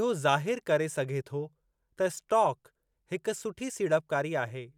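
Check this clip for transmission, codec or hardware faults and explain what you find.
Nothing audible in this speech recording points to a fault anywhere in the signal chain.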